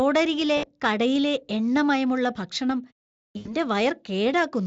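At 0.57 to 0.69 s and again at 3.37 to 3.56 s, VoIP packet loss concealed by the speech codec: about 60 ms and then 80 ms go missing, and the decoder stretches its last pitch into a fading buzz or coloured noise, not the silent gap or click of a plain dropout.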